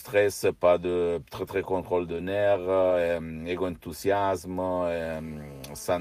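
Brief rough, noisier patches of speech appear without any gap at 1.45–1.47 s, just after "pas de très"; at 1.63–1.73 s, after "pas de très très"; and at 2.12–2.14, 2.16–2.18, 2.54–2.56, 2.82–2.84 and 2.90–2.92 s. Each is a lost packet rebuilt from error correction: the following packet carried a low-bitrate copy of the missing 20 ms, and the decoder played that coarser copy instead.

From 5.03 s to the end, a hard, raspy buzz at about 217 Hz, rich in harmonics and unrelated to the speech, sits steadily about 28 dB below the signal. This is GSM phone buzz from a nearby 2G phone on a call, whose radio bursts are rectified in the audio circuitry.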